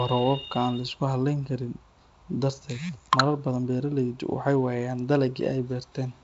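Speech over G.722 wideband telephone coding at 48 kbit/s, bandwidth ending near 7.7 kHz, with no faults found.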